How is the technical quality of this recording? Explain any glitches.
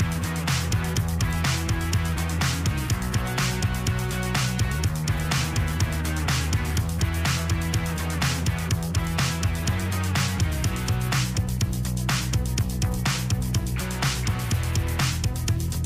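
The first part of the recording carries one clear fault.

Crude rate conversion, 0.0 to 9.57 s: samples are dropped or repeated without filtering, which fits a 48 kHz to 44.1 kHz change, leaving a gritty, inharmonic fizz roughly 25 dB down.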